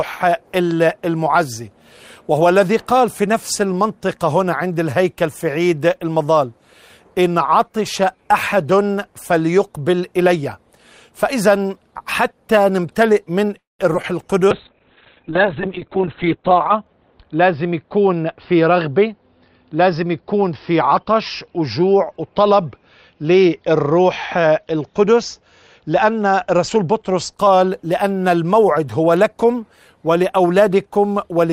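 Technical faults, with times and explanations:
13.57–13.81 s, call audio freeze: The sound stops and a short continuation of the last sound fades out, leaving about 0.17 s of silence before the audio resumes exactly where it left off. Nothing is lost, but 0.22 s of delay is inserted. This is likely packets held up in transit, so the receiver's jitter buffer ran dry and it extended the final fragment of audio until delivery restarted.
13.93–13.96 s and 14.02–14.05 s, short concealed packet loss: Two brief smears follow closely after the freeze, each a quick wobble where the audio blurs for a moment. Each time about 20 ms never reached the decoder in time. The receiver covered the holes by extending the preceding sound, 7 ms of fill at the first and 14 ms at the second, then crossfading back into real audio. A short transient at either point can disappear.
14.52–27.40 s, call bitrate drop: The sound turns muffled and rough, with everything above about 4 kHz gone, compared with the full 20 kHz band before. 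It is at its worst for about 2.35 s at the bottom of the drop. The estimated bandwidth of the connection fell, and the encoder went from 32 kbps to 6 kbps. At that rate Opus quantises coarsely and discards the upper frequencies, which gives the dull, watery texture. Quality returns when the bitrate recovers.
15.88–17.43 s, jitter buffer speed-up: Inside the low-bitrate stretch, the audio runs about 13% fast (113% speed) while the pitch stays where it was, so this passage sounds hurried. The jitter buffer was holding more audio than it aims for. To shed the excess, the receiver repeatedly cut out short slices of one or a few pitch periods, removing roughly 0.2 s in total.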